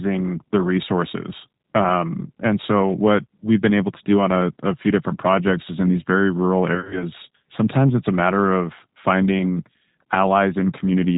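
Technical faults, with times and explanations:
Throughout: G.729 codec. Speech sounds rough and synthetic with nothing above 4 kHz, which fits an 8 kbit/s G.729A stream rebuilt from a simple model.
6.75 to 7.05 s: VoIP packet loss concealed by the speech codec, between "in these very rural" and "sometimes it's a". About 110 ms drops out in gaps up to 40 ms. The decoder stretches the last sound into a fading buzzy tone or coloured noise.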